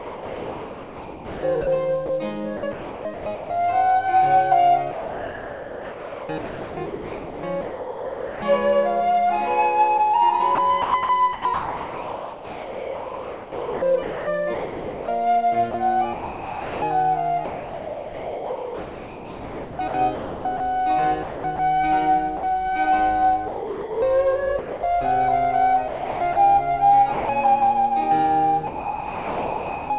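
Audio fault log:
0.0–3.5 s, 4.91–8.42 s, 10.55–22.43 s, 23.48–24.83 s, 25.88–27.29 s: sound chopped by the voice detector. The sender likely kept toggling transmission, so quiet stretches became comfort noise, about 2.2, 3.2, 7.1, 0.8 and 0.5 s respectively. The result is choppy.
28.67–29.9 s: sound dropped by the voice detector. The detector likely judged the sound to be background and stopped sending altogether. For the whole 1.23 s, steady comfort noise replaces the audio, and the sound comes back just before the clip ends.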